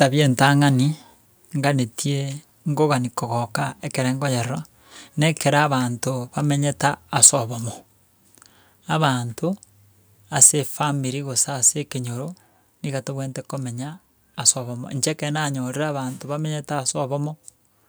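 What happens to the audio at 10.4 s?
From 10.41 to 10.46 s the speech peaks flatten into microphone overload, likely from input gain set too high, driving peaks about 7 dB past full scale. About a tenth of the samples are clipped, the waveform shows squared-off tops, and the spectrogram shows harsh broadband smearing. At 10.44 s the microphone volume is stepped down by about 2 dB, likely an automatic gain correction, so voice and background drop together and the waveform envelope shows a small sudden step.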